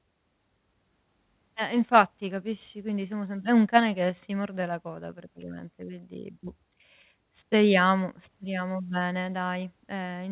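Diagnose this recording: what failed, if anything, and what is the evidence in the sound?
Nothing failed: the speech comes through the WebRTC call path intact, and the absence of anything above 4 kHz is the normal narrowband ceiling of G.711 mu-law at 64 kbps.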